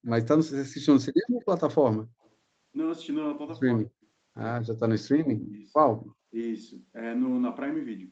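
At 0.06 s, and again at 1.4, 2.24, 5.4 and 5.97 s, delayed copies of the speech trail about 130 ms behind it, from roughly 40 dB down to about 15 dB below the talker, loudest at 5.4 s. This is an echo leak, likely a far-end speakerphone whose echo canceller let residue through. The fixed lag sets it apart from room reverb.

Between 0.98 and 1.19 s, 3.65 and 3.99 s, and 4.53 and 5.64 s, the talker drops sharply, by around 40 dB. This is speech suppressed in double talk, likely the canceller ducking both sides while the other end spoke. The gaps are not packet loss, which would sound glitchy rather than gated.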